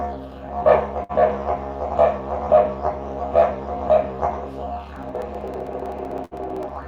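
Music with two bursts of packet loss, at 1.03 to 1.12 s and 6.25 to 6.34 s. In each, about 60 ms is skipped and a fading, smeared continuation fills the gap, visible as blurred, decaying spectrogram bands. From 4.96 s to the end, periodic USB or driver dropouts insert brief silences every 64 ms, heard as regular ticks and seen as evenly spaced waveform notches and thin vertical spectrogram lines.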